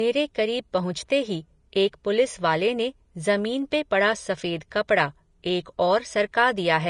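Throughout the speech, nothing sounds above 10.6 kHz and the treble is hissy and grainy, likely Vorbis compression at a low bitrate, around 34 kbps.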